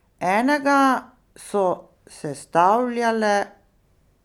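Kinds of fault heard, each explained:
No faults can be heard in this speech recording, and the signal carries no audible technical defect.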